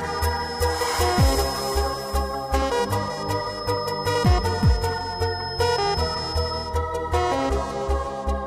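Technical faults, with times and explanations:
0.00–6.78 s, feedback whistle: a thin, steady tone at 5.2 kHz sits behind the sound, roughly 15 dB below it, swelling and fading slowly in level before it stops. The likely cause is a loudspeaker-to-microphone loop held just at the edge of feedback, so one frequency keeps ringing without running away. On a spectrogram it shows as a single bright horizontal line at 5.2 kHz. On the waveform it is buried under the louder signal.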